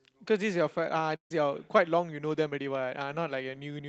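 A speech clip that has passed through a WebRTC call path, where the Opus coding limits the top end to about 8 kHz. At 1.15 s a burst of packet loss strikes. The receiver stretches the last sound to cover the gap, lets it fade, and then drops to near silence. Speech resumes at 1.31 s. About 150 ms of the original is simply missing.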